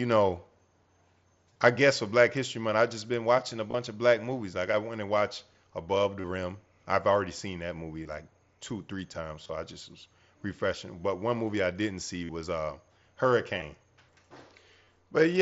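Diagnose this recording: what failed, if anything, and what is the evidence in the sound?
Bluetooth link dropped headset packets; the receiver's concealment refilled each gap from recent waveform, giving brief buzzy repeats with a warble on recovery at 1.53, 3.71, 6.21, 8.04, 9.43, 12.24, 13.59 and 14.85 s.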